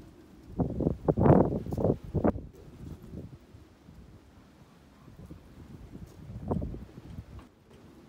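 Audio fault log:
2.30–2.53 s and 7.47–7.71 s, one channel drops out: The level falls abruptly by about 6 dB for roughly a quarter second each time, then returns. The likely cause is one stereo channel briefly going silent, halving the shared content in the mono sum.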